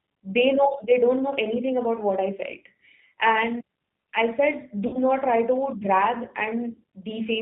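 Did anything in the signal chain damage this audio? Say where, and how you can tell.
Yes. G.729 codec, throughout: this is a codec-stage fault. The audio is cut off at 4 kHz and has a rough, synthetic edge that is plainly audible, which fits G.729A at 8 kbit/s. The decoder rebuilds each 10 ms frame from a vocal-tract filter, a pitch predictor and a few pulses, so the original waveform detail is gone.

VoIP packet loss concealed by the speech codec, 4.87 to 4.99 s, just before "not try": this is a network-stage fault. About 60 ms of audio was lost, which fits two dropped packets. The decoder filled the gap by extending its last pitch and filter with falling gain, which gives a fading stretch of buzzy tone or coloured noise. The sound stays weak or distorted for tens of milliseconds after about 4.99 s as the following frames recover.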